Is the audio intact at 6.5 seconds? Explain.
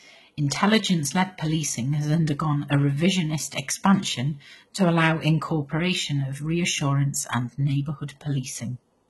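No. At 6.5 seconds, as throughout the speech, HE-AAC compression is likely at work: the treble is rebuilt by copying lower bands upward rather than coded directly, so sibilants sound gritty and metallic, nothing survives above 11.8 kHz, and the heavy damage fits a very low bitrate around 16 kbps.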